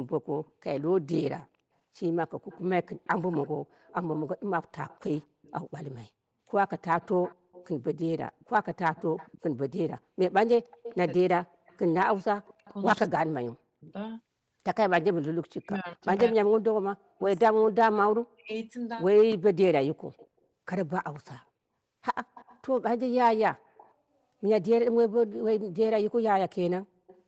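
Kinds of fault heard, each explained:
Echo leak: The far end's echo canceller likely failed to remove everything its microphone picked up from the loudspeaker, and the leftover was sent back down the call. It comes through as a faint copy of the voice trailing the talker by 241 ms, about 25 to 35 dB below the speech. Brief scraps appear near 0.46 s and 27.07 s, with longer stretches from 2.4 to 12.47 s, 15.01 to 17.21 s and 20.17 to 23.93 s.
Speech suppressed in double talk: When both sides spoke at once, the echo canceller likely could not separate the local talker from the loudspeaker echo, so it turned everything down together. The voice dips sharply and breaks up in pieces, falling by about 40 dB at its deepest. This happens between 11.24 and 13.91 s, roughly a second and a half in total, and again between 15.57 and 18.52 s, about two seconds in total.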